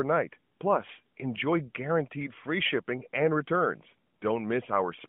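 No technical faults can be heard in this speech clip. It comes through an AMR narrowband mobile codec at 12.2 kbps, so the band is confined to roughly 150 Hz to 3.4 kHz and only light codec damage can be heard.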